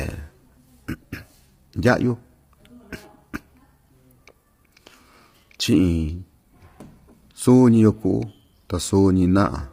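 Low-delay AAC compression, present throughout the speech, is the likely cause of the heavy coding damage heard from start to finish. The voice sounds rough and grainy, with noise filling the gaps between the pitch harmonics, because the codec's short frames cannot separate those harmonics cleanly and run short of bits. The damage points to a low bitrate, around 24 kbps, and the spectrum stops entirely at 15.6 kHz.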